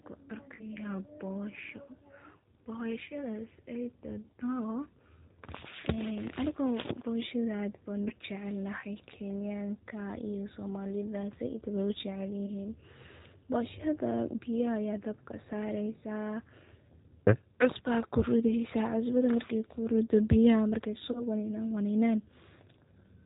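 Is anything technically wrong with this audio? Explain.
Yes. Two faults can be heard.

Throughout, the speech carries G.729 codec damage, and it is plainly audible. The codec models each short frame as a vocal tract filter driven by a pitch predictor and a few sparse pulses, so voices come out slightly rough, buzzy and synthetic. That character fits an 8 kbit/s G.729A stream. On a spectrogram, energy stops flat at 4 kHz, and harmonics look smeared and grainy rather than cleanly striated.

VoIP packet loss concealed by the speech codec occurs four times: 0.55–0.64 s (about 40 ms of audio missing), 8.08–8.12 s, 12.46–12.51 s, and 21.12–21.24 s just before "waninan waninan" (about 20 ms missing in each of the last three). The decoder fills each gap by repeating its last pitch and filter with falling gain, which stretches the sound into a brief buzzy tone or coloured noise that fades, and the voice stays weak or distorted as it recovers. 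On a spectrogram these spots show flat, over-regular horizontal harmonics. On the waveform they appear as a tapering, too-periodic stretch.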